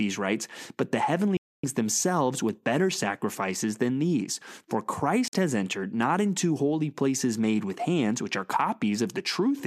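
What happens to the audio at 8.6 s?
Nothing goes wrong at 8.6 s: the speech carries on intact through that moment, with no dropout, click or distortion to be heard.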